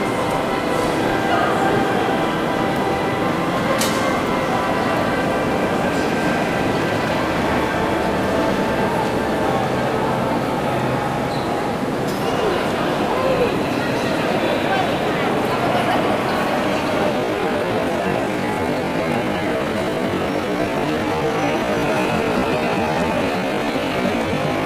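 From 17.1 s to the end, a time-stretched section plays at half speed with pitch unchanged. Likely software stretching repeats short pieces, so it drags.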